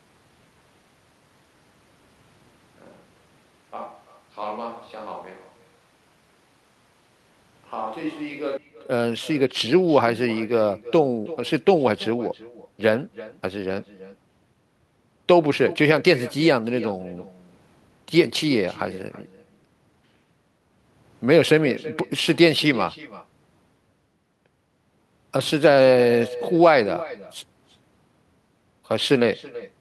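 A speech recording with two problems. Right from the start until 8.57 s, the sound is hollow, roomy and thin in the bass, with the level down by around 10 dB and room noise sitting about 25 dB under it, then it snaps back to a close, full sound. That's likely a switch to a distant microphone, with the close mic's feed missing for that stretch. Throughout the whole clip there's also echo with no canceller: a faint copy, about 18 dB down, trails everything by roughly a third of a second, as the far end's loudspeaker feeds back into its mic and returns over the network.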